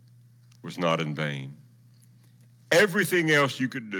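Microphone overload runs from 2.72 to 3.45 s. The speech is pushed about 10 dB past the converter's limit, so roughly 7 percent of samples are flattened, giving a harsh, crackling edge, likely from excessive input gain. A microphone volume step-down comes at 2.73 s (about 2 dB) and again at 3.72 s (about 6 dB). Each is a sudden level drop, likely the call software reducing input gain.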